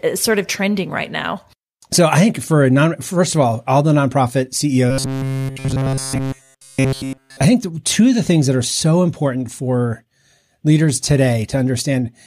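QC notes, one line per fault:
4.91–7.44 s, robotic sound from repeated short buffers: for about 2.5 s the speech collapses into a rigid, metallic buzz pitched at 134 Hz, still loosely tracking the syllables, with essentially none of the normal audio getting through. The cause is likely a starved playback path looping the last short chunk again and again while fresh audio is skipped. A repeat period of about 7.5 ms fits a 134 Hz buzz.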